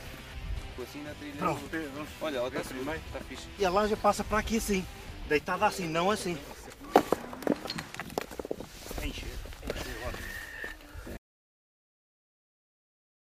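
At 11.17 s the sound cuts off abruptly and the last 2.0 s to the end are digital silence with no room tone: an audio dropout to silence, likely from the input being lost while recording continued. Unlike a fade-out or natural pause, nothing trails away and no background remains.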